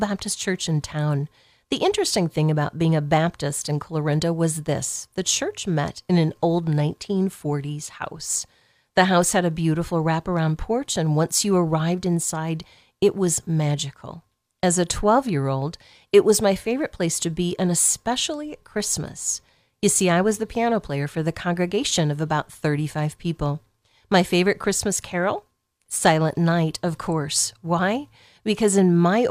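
No technical faults are audible.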